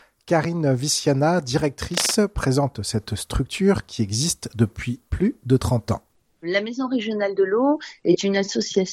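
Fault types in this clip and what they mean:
Cable scratch noise: dense, uneven scratching from 1.91 to 2.15 s, nearly as loud as the sound, likely a worn connector whose contact flickered as it moved.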